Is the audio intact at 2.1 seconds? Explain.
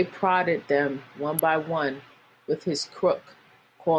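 Yes, the audio at 2.1 seconds is intact, with no dropout, glitch or other fault to be heard at that moment.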